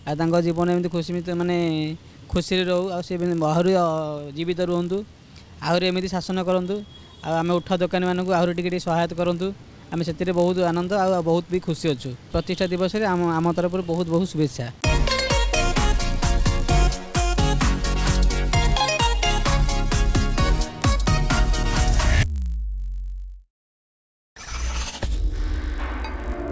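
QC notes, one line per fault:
Throughout: resampler restarted on every block. Each 20 ms block is converted separately, so its edges carry errors, giving a 50 Hz buzz under signal, consistent with a 48 kHz to 16 kHz conversion.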